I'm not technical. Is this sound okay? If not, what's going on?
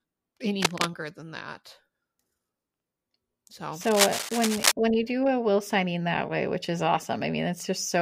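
No. Cable scratch noise appears twice: from 0.62 to 0.90 s, just before "than that", and again from 3.81 to 4.72 s, just before "when you do a". Each time, a burst of scratchy, rustling crackle sits on top of the speech, roughly as loud as the voice itself. This is likely a worn cable or plug being moved, so the electrical contact flickers rapidly and adds that rough noise.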